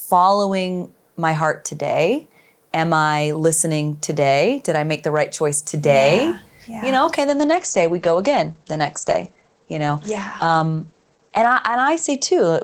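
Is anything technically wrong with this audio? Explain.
Yes. From 7.3 s, just after "know okay", to the end there is a call bitrate drop. The encoder falls from 32 to 12 kbps and cuts bandwidth from 20 to 8 kHz, so the sound turns coarse and muffled without gaps, unlike packet loss, and never recovers.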